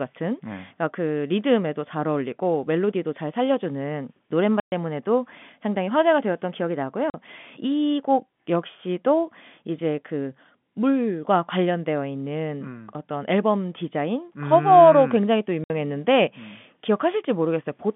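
Speech over a telephone-band line, with packet loss filled with silence. The sound drops out at 4.6 s for 120 ms, at 7.1 s for 40 ms, and at 15.64 s for 60 ms. Each gap has hard edges. The lengths fit whole 20 ms packets lost in transit.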